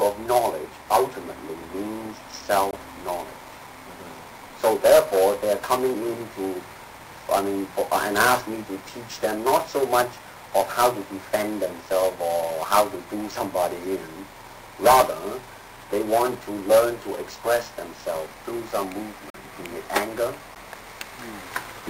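The output went unfilled or got invalid values, causing blocks of digital silence: a 21 ms hole at 2.71 s, a tick at 9.6 s, a 43 ms hole at 19.30 s, and a tick at 20.55 s.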